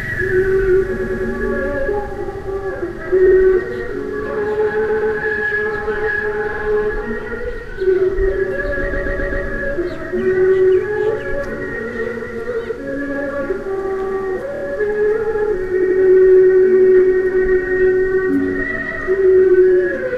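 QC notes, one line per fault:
0.96–1.27, 3.26–3.36, 4.87–5.14, 6.52–6.63, 8.92–9.45, 14.54–14.62 and 15.82–15.98 s: repeated frames. A block of 26 to 131 ms replays two to four extra times, causing a stutter. The block sizes are multiples of 26.1 ms, which fits MP3-style frames. Each stutter lengthens the audio, by 0.52 s at 8.92 s.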